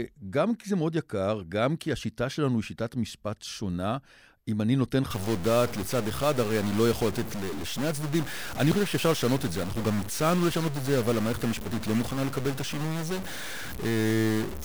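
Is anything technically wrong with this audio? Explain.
Yes. From 5.10 s to the end at 14.65 s, the speech carries what sounds like a stuck bit, likely one data bit held at a fixed value by a broken line or converter. About half the samples are then offset by that bit's weight, a step of roughly -30 dBFS, following the waveform's shape. The result is harsh, buzzy distortion over the speech, and because small values flip sign around that bit, the pauses fill with a steady noise floor instead of going quiet.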